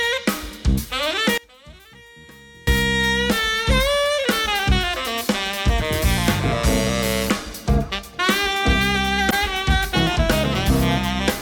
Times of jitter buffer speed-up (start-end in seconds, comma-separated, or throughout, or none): none